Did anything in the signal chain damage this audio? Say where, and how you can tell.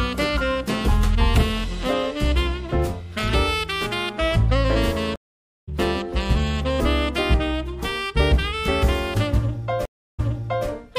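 Yes. Both faults are stream reconnects at the network stage, where the connection dropped and playback restarted. At 5.16 s the audio goes silent for 0.52 s. It resumes at 5.69 s, roughly half a second further on, so material is skipped. At 9.85 s there is a 0.33 s silence. The audio then picks up 0.49 s earlier, so material repeats until 10.67 s. In each case a fresh decoder joined the stream mid-flow, at a different point from where it broke off.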